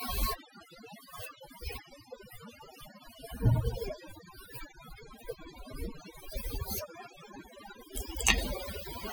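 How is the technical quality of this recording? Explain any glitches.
The quality is poor throughout, with one brief glitch near the end.

Overdone noise removal runs the whole length of the speech. The processor cuts any frequency band sitting near its noise estimate, so the background drops to near silence with twinkling specks. A spectrogram shows scattered isolated dots between words and ragged, hollowed-out speech harmonics.

Damaged data in a compressed stream appears at 8.37 s as a short chirp or blip. Corrupted bytes there made the decoder misread the affected frames and lose sync until it found the next valid header. The spectrogram shows a brief vertical smear of broadband energy, and the waveform shows a small discontinuity.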